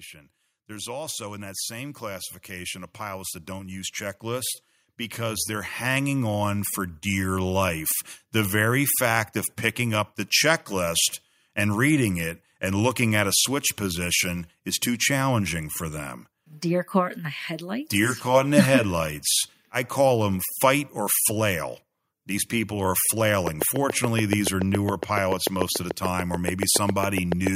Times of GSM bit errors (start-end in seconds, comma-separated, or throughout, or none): none